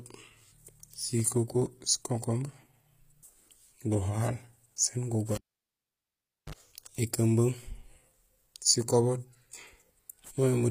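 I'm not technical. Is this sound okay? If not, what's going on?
No. Throughout the clip there is damage that sounds like HE-AAC compression, likely from squeezing the speech into a very small file. This kind of compression keeps only the lower pitches properly and fakes the high, airy part by copying lower sounds upward. The highs stay bright but don't quite match, so s sounds come out gritty, metallic or slightly lisped. The top of the range is also cut off entirely.

At 5.35 seconds, right after "guhaal sén", the cable was pulled and plugged in. There is a pop, then the sound drops to near silence for about 1.15 seconds. A brief burst of mains buzz, a low 50 Hz hum lasting about 55 milliseconds, comes through while only the tip is touching. A second pop follows as the speech returns at 6.55 seconds.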